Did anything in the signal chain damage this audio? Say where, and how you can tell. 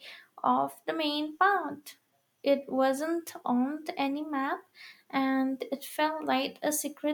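No, no damage is audible.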